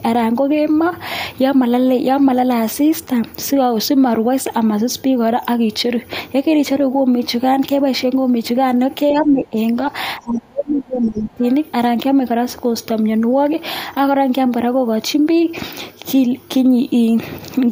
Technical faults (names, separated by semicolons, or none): speech suppressed in double talk; other side's voice leaking through